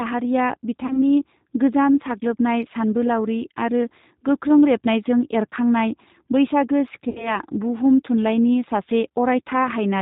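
Throughout this speech clip the voice sounds slightly rough and synthetic, thin and muffled, with nothing above 4 kHz. That is the G.729 codec, here plainly audible. It squeezes speech to a rate that fits 8 kbit/s by rebuilding each 10 ms frame from a vocal tract filter, a pitch estimate and a handful of pulses rather than the actual waveform. Twice the voice smears into a fading buzzy tone or coloured noise and then returns weak or distorted: from 0.86 to 0.99 s, and from 7.09 to 7.39 s. These are VoIP packet loss concealed by the speech codec. About 40 ms and then 60 ms of audio went missing, which fits two and three lost packets. The decoder filled each gap by extending its last pitch and filter at falling gain. Because every frame depends on the one before, the voice stays damaged well after packets resume, which is why the second disturbance lasts about 0.3 s.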